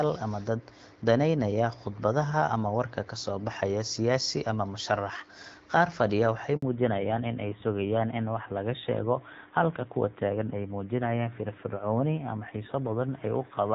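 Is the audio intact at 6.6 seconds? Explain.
No. At 6.6 seconds you're right inside a handover gap, running from about 6.56 to 6.62 s, so roughly 60 ms of nothing. The call got passed from one network to another, and while the link was switching over no speech frames came through. The speech dies away almost instantly, there's a short hole of silence, and whatever was said in that sliver is simply gone, not muffled or smeared.

Right as the sound comes back at 6.62 s, a fallback to narrowband kicks in and stays until the end of the clip. Before the gap the call sounds like HD Voice with fairly clean wideband speech, the kind you'd expect from AMR-WB at a mid rate like 12.65 kbit/s. After it, the new link settles on an older narrowband codec, and everything above 4 kHz is cut away. The speech turns duller and rougher, which fits a lower-rate AMR-NB mode around 7.4 kbit/s.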